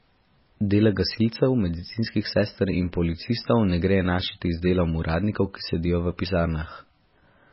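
An MP3 encoder running very short of bits, likely at a rate near 16 kbps, has shaped this speech recording throughout: nothing remains above 5.6 kHz, and the heavy damage leaves a watery, swirling texture with smeared consonant attacks and metallic edges on s sounds.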